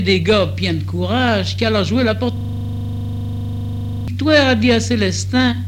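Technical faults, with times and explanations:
2.37 to 4.08 s, system hang loop: the audio abruptly locks onto one 40 ms slice and replays it back to back, about forty times, for roughly 1.7 seconds. The playback chain froze while the sound hardware kept reading the same stretch of its ring buffer, so the loop repeats exactly. Cycling 25 times a second, it comes across as a gritty, rattling buzz at 25 Hz rather than a distinct stutter.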